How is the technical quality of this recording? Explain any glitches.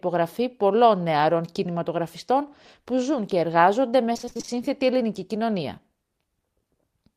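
Between 4.13 and 4.50 s the speech turns choppy, with small pieces missing. This is repeated packet loss (robotic sound): roughly nine short holes, none longer than 26 ms, follow one another in quick succession. Each hole is filled by stretching the sound just before it, so about half of this stretch, around 180 ms, is patched-over continuation rather than real audio.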